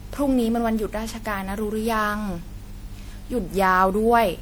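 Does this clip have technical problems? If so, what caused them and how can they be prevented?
Yes. The speech has generation loss all the way through: a swirly, hollow, smeared quality with blurred consonant attacks, worse than one pass would give. That's likely from repeated MP3 re-encoding, something like seven passes at around 96 kbit/s, each adding fresh quantisation damage on a shifted frame grid. To prevent it, keep a lossless master and encode to MP3 only once, at the final step.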